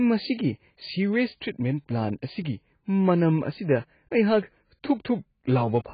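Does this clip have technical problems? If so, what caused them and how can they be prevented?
Yes. Throughout the speech, nothing survives above about 4.9 kHz, and sibilants and vowels sound dull, smeared and warbling. This is likely heavy AAC compression: at such a starved bitrate the encoder lowers its cut-off and coarsely quantises what remains, which fits a stream of around 16 kbps. Unlike a simple low-pass filter, the damage includes that swirly, unstable texture, not just missing treble. To prevent it, encode at a higher bitrate or keep an uncompressed master.

From 4.17 s to 4.37 s there is hard clipping, with the signal driven about 4 dB past the limit of a stage so its peaks are sliced flat. Those flat tops add crackle confined to the loud moments, whereas codec smearing is constant and dulls rather than adds harshness. Set gain so peaks stay a few dB below full scale.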